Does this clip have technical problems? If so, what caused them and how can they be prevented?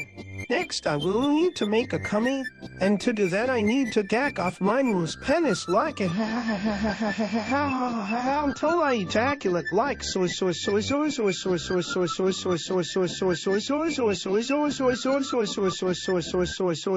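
Yes. At 6.10 s the top end suddenly collapses to nothing above about 7.6 kHz, with more swirly codec artefacts and no gap, which sounds like an adaptive stream dropping to a lower bitrate, roughly 128 to 32 kbit/s, and staying there until the end. To prevent it, give the connection more headroom or set a higher minimum bitrate.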